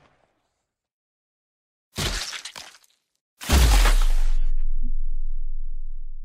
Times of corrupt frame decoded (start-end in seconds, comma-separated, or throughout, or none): 4.85-4.89